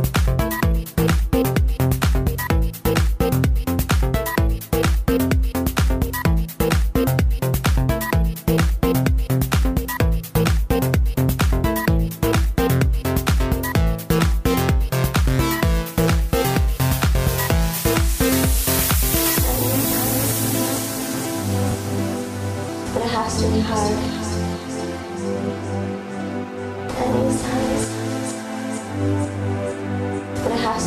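No faults can be heard anywhere in the clip.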